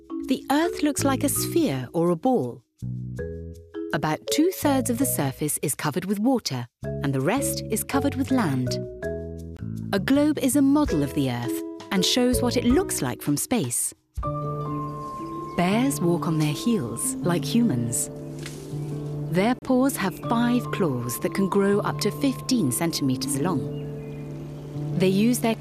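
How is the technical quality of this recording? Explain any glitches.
The recording has two brief dropouts. Each is a gap at a join of encoded pieces, at 9.57 to 9.59 s (about 22 ms) and 19.59 to 19.62 s (about 32 ms), ten seconds apart. Separately encoded segments were butted together with their encoder delay and end padding left in. On a waveform this is a flat silent notch; on a spectrogram, a thin vertical blank stripe with smeared edges. The sound then resumes where it stopped.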